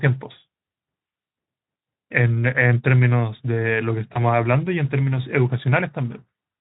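From 4.13 to 4.20 s the speech smears into a buzzy tone or coloured noise that fades, then sounds weak: VoIP packet loss concealed by the Speex codec, likely one lost 20 ms frame.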